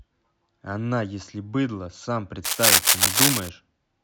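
A speech clip carrying cable scratch noise from 2.44 s to 3.49 s: a dense, irregular crackling and rustling that sits over the speech for about a second, roughly 10 dB louder than the speech itself. The bursts are uneven in level and spacing, the sound of contact resistance changing rapidly while something is moved. The likely cause is a worn cable, connector or control being handled during that second.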